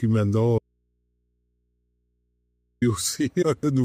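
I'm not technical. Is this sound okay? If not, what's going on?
No. At 0.59 seconds the sound suddenly cuts out, and until 2.82 seconds, a little over two seconds, all that's left is a low electrical hum, very faint. Then the sound snaps back mid-flow. This is an audio dropout to a faint residue. It's abrupt, not a natural pause or fade, so the wanted signal was likely lost somewhere upstream while the rest of the chain stayed switched on, letting its background hum through.

Around 3.41 to 3.43 seconds there's a brief glitch where the sound jumps ahead, skipping roughly 150 milliseconds. This is compressed frames skipped. Compressed audio is stored in small chunks, here about 21.3 milliseconds each. A short run of them, which fits about seven frames, was missing or rejected as damaged, so playback leapt over them.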